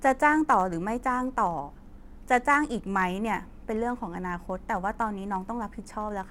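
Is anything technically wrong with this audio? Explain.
Yes, there's a block size mismatch (truncated) running through the whole speech clip. One stage hands over blocks a little longer than the next stage reads, so the tail of every block gets dropped. Those regular cuts give a steady buzz at 100 Hz, which points to blocks about 10 ms long. So little is lost per block that the speech still runs at essentially normal speed and pitch, 1.0 times, with the buzz sitting under it.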